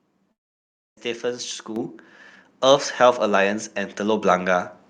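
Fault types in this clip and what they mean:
Long network dropout: From about 0.31 s to 1.0 s, roughly 0.66 s of speech is missing, likely because packets stopped arriving. The receiver stretches the last sound into a fading buzz, then holds near-silence until the speech resumes without the lost portion. On a waveform the envelope tapers into a flat, nearly empty stretch. A spectrogram shows smeared, repeating harmonics dissolving into a blank band before normal speech structure returns abruptly.
Microphone volume stepped up: The call software raised the microphone's input level in single jumps, once at 1.76 s by about 7 dB and again at 4.22 s by about 4 dB. Each time, the speech and the background noise get louder together, with no gradual ramp. The waveform shows the envelope widening sharply at each point. On a spectrogram, every frequency band, including the noise floor between syllables, brightens at the same instant.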